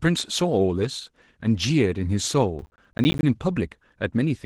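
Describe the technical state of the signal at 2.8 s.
At 2.8 s the signal sits inside a burst of processor overload crackle running from 2.59 to 3.23 s. The processor is failing to fill its small audio buffers on time, apparently blocks of around 10 ms, and each missed block drops to silence before the next arrives. Dozens of misses in a row sound like gritty, tearing crackle over the speech. A waveform shows the signal chopped by flat silent gaps with abrupt edges. On a spectrogram these appear as dense vertical broadband streaks.

Underneath, Opus voice compression colours the whole clip, including this moment. The dull, slightly hoarse and faintly robotic quality suggests a low bitrate near 16 kbps in hybrid mode, with a linear-prediction core for the lower band and a coarser transform layer above 8 kHz. On a spectrogram the upper band looks smeared and patchy, blocked in steps consistent with 20 ms frames, and the harmonics below it look roughened where the excitation is coded coarsely.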